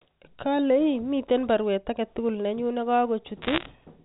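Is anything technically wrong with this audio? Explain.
Yes. From 3.42 to 3.66 s the speech picks up a brief burst of crackle, the signature of bit errors on a digital phone line. On this G.711 mu-law channel each flipped bit corrupts a single 8-bit sample, and an error rate of around one percent fits what is heard. Flips in the sign or top bits throw individual samples far off, giving sharp isolated ticks scattered over speech that itself stays intact and band-limited below 4 kHz. Lost packets would instead leave gaps or smeared concealment.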